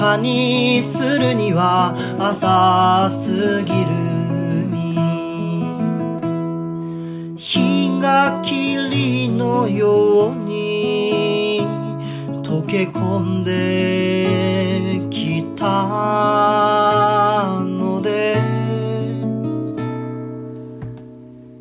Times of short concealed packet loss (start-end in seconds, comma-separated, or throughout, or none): none